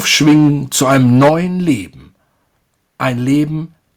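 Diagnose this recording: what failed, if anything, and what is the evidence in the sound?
Microphone overload at the converter stage: the input gain was likely set so high that speech peaks drove the analogue-to-digital converter past full scale, and the waveform tops were flattened. The harsh, crackling edge is heard from 0.11 to 0.5 s, running about 8 dB over the limit with roughly 15% of samples clipped, and again from 0.81 to 1.3 s, also about 8 dB over with around a tenth clipped. A brief, milder burst at 1.69 to 1.72 s is only about 1 dB over.

Microphone volume stepped down in call processing: the software's gain control likely reacted to the clipping by lowering the device's input level in a single jump rather than a smooth fade. Speech and background drop together by about 2 dB at 0.28 s, in the middle of the first distorted stretch, and by about 7 dB at 1.29 s, right as the second overload ends.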